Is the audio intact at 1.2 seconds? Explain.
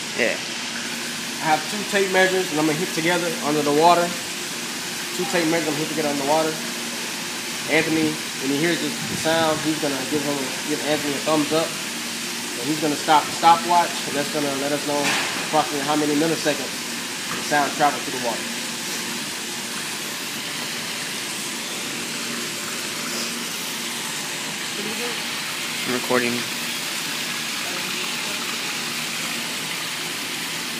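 Yes, the audio at 1.2 seconds plays through without any dropout, glitch or other fault.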